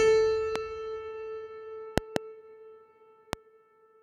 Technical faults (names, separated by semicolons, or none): loud pop